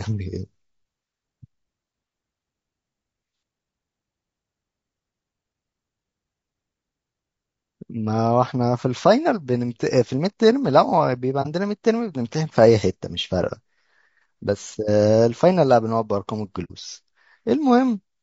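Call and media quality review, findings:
Rough, grainy speech throughout, noise filling gaps between harmonics, top band thin and synthetic-sounding. Likely low-delay AAC compression, AAC-ELD: short frames resolve pitch harmonics poorly, and the bit budget seems low, fitting around 32 kbps. Steady, not intermittent like packet damage.

AAC frame loss with muting at 11.42–11.47 s and 16.64–16.72 s. Brief soft-edged holes, about 30 ms then 60 ms, fitting one and two lost frames. Decoder zeroed the spectrum, and overlapping windows fade out and back in rather than cutting hard.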